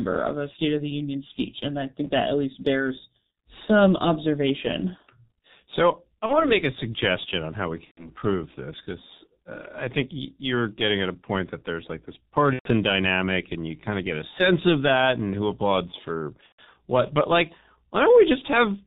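The whole clip runs through the G.723.1 codec, squeezed heavily at a rate that fits its 6.3 kbit/s mode. With nothing passed above 4 kHz and a slow-moving voice model, the speech comes out muffled and hoarse, with consonants smeared together. On top of this comes VoIP packet loss concealed by the speech codec. From 6.26 to 6.49 s a gap that fits one 30 ms frame was filled by the decoder repeating its last pitch and filter at falling gain. The same happens from 7.85 to 8.09 s and from 12.53 to 12.70 s, where the gaps fit about 120 ms each. From 16.46 to 16.78 s, losses totalling about 150 ms are scattered over roughly 300 ms, the longest run near 120 ms. Each time the speech stretches into a fading buzzy tone or coloured noise and stays weak and distorted briefly after the gap.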